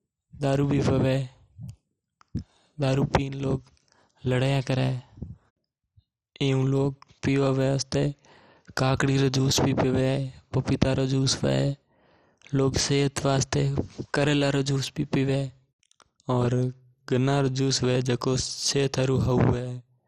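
MP2 compression, throughout the speech: nothing above 14.7 kHz, and a dull, gurgling, granular distortion as starved sub-bands flicker, likely from a Layer II encode near 56 kbps.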